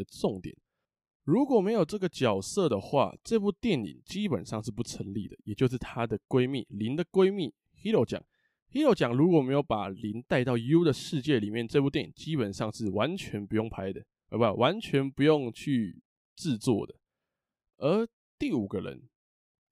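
No technical fault can be heard anywhere in this speech recording, and the signal stays intact and consistent throughout.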